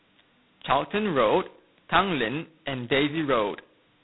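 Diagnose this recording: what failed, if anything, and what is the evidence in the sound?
A harsh, rasping hiss rides on the speech from start to finish, swelling and fading with its level, and nothing above 3.9 kHz survives. This is codec damage: G.726 ADPCM coding at very few bits per sample, which fits the 16 kbit/s mode, leaves coarse, level-tracking quantisation noise.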